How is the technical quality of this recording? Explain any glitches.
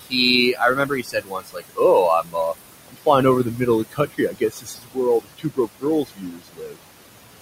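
The recording is degraded by heavy noise suppression that repeatedly swallows parts of the speech.

Noise suppressor artifacts run throughout: the background sinks between phrases, because the suppressor pulls bands it judges to be noise down by about 21 dB. The room noise, about 12 dB below the speech, is what it is fighting.

Speech cut by the noise suppressor makes syllables turn faint or vanish at 0.01–0.14, 0.53–1.8, 2.22–2.36, 2.88–3.07, 3.44–3.67, 3.9–4.98, 5.21–5.86 and 6.02–6.79 s. The suppressor mistakes quiet speech for noise and drops it by up to about 22 dB, though only about 7 dB at 3.44 s.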